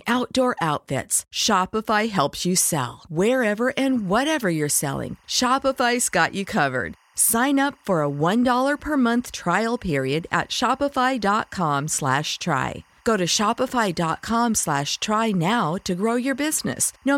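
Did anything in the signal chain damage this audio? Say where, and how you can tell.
Yes: timecode bleed, analogue wiring. From 3.89 s onward, a neighbouring track's square-wave code leaks in as a faint warble about 35 dB under the speech; spectrograms show steady bands near 1 and 2 kHz.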